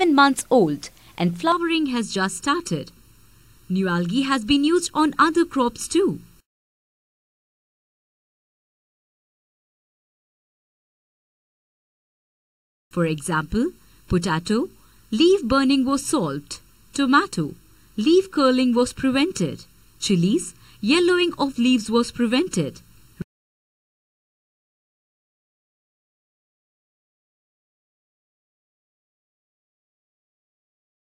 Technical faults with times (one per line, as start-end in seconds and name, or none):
1.52-31.02 channel delay (comb filtering)